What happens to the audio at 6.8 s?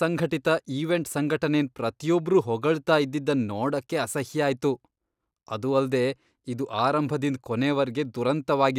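Weak reception lets bit errors slip past the error correction into the MP2 audio data, producing DAB burbling from 6.71 to 6.81 s. Corrupted samples put short blips of noise into individual sub-bands, and corrupted scale factors briefly throw sub-bands to the wrong level, frame by frame, and the short burst hits about 18 frames at an error rate of roughly 0.15 percent. The speech picks up a brief burbling over the top.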